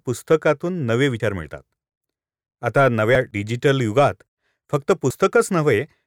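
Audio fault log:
1.2 s, 3.15 s, 5.1 s: audio missing between chunks. At each point the speech skips forward by around 50 ms, likely lost while a recorder working in 2-second chunks closed one block and opened the next. The waveform shows an abrupt splice with no silent gap, and the spectrogram a sharp vertical seam.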